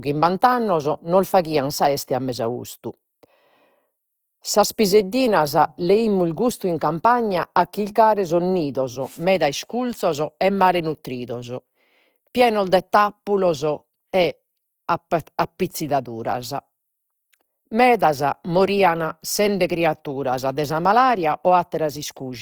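From start to finish the speech has a rough, grainy texture, with a coarse, noisy edge on sustained vowel sounds. High frequencies reach up to about 20.2 kHz, so nothing sounds muffled. The damage is plainly audible. The likely cause is Opus compression in its CELT music mode, where bands short of bits get filled with folded or noise energy, consistent with a rate near 24 kbps.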